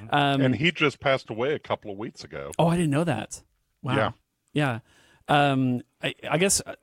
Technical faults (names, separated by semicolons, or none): none